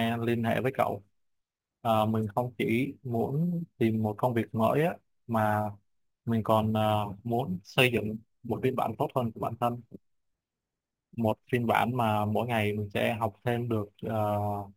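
Speech runs the full clip with crude rate conversion present from start to finish. It sounds like a gritty, inharmonic fizz riding on the louder and brighter syllables, roughly 25 dB below the voice. Samples appear to have been repeated rather than filtered, which fits a nearest-sample jump from 32 kHz up to 44.1 kHz. Zoomed in, the waveform shows small stair-steps. A spectrogram shows faint tones unrelated to the voice's harmonics, including energy above 16 kHz that tracks the speech.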